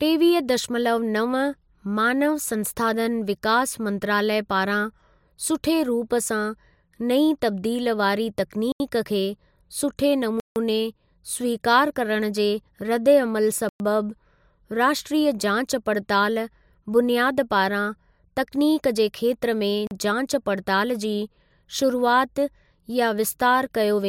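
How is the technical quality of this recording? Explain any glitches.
The speech has four dropouts, each a block of digital silence: 8.72 to 8.80 s (80 ms, right after "नईं तब्दील वारी", before "खे सुठे"), 10.40 to 10.56 s (160 ms, just after "खे सुठे"), 13.69 to 13.80 s (about 110 ms) and 19.87 to 19.91 s (40 ms). Each time the output gets zeros instead of audio, either because the buffer wasn't filled in time or because a calculation produced invalid values. The sound cuts out and returns with no fade, leaving short holes of different lengths.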